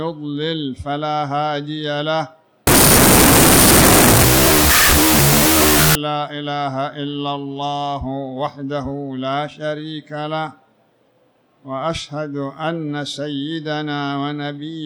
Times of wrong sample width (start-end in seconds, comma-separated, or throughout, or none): 2.67-5.95